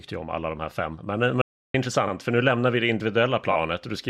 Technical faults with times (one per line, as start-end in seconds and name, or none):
1.42-1.74 audio dropout to silence
2.07-2.13 repeated frames
3.51-3.56 repeated frames